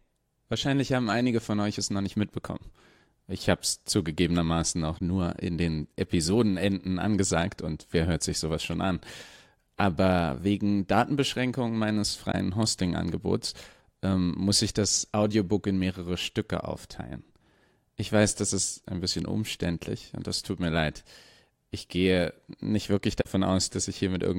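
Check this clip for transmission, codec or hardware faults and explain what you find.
The speech has three brief stretches of concealed corrupt frames. At 4.98 to 5.01 s, between "habe es zugegebenermaßen auch" and "nur in den", at 12.32 to 12.35 s, and at 23.20 to 23.26 s after "gehe nicht wirklich", damaged audio was concealed. Corrupted bits in the AAC stream were detected, and the decoder covered the damaged frames by muting them or substituting a scrambled copy of the previous good spectrum.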